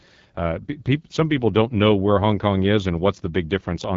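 From start to finish the speech carries the sound of the AMR wideband (HD Voice) codec at a low rate, and the damage is plainly audible. Voiced sounds turn rough and raspy because the pulse-driven vocal tract model has too few bits, which fits one of the lowest rates, around 8.85 kbit/s. A spectrogram shows smeared, grainy harmonics, a noisy band from 6.4 to 7 kHz, and nothing above 7.5 kHz.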